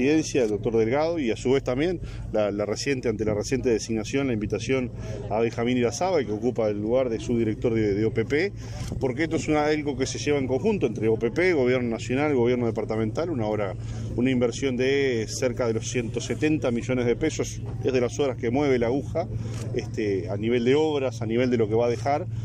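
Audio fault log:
Nothing stood out on listening to this clip.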